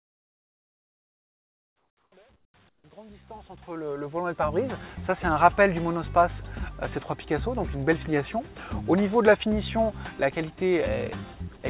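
From 0.00 to 2.12 s, and again at 2.36–2.54 s and 2.69–2.84 s, the quiet background turns into a flat, even hiss that lacks the texture of the surrounding ambience. It drops by about 19 dB, about 16 dB and about 14 dB in those three stretches, while the background sits about 38 dB below the loudest parts. This is comfort noise in place of the background. The likely cause is discontinuous transmission: the sender stopped sending during pauses, and the receiver filled the gaps with synthetic noise. The first stretch also falls under the smooth fade-in that runs until 4.72 s.

At 11.57–11.63 s, 60 ms of sound vanishes and steady noise takes its place before the sound returns. This is sound dropped by the voice detector. The detector likely mistook the sound for background and briefly stopped transmission, so the receiver played comfort noise over the missing part. Across the clip, nothing reaches above 4 kHz, which matches the narrowband G.711 A-law call codec at 64 kbps.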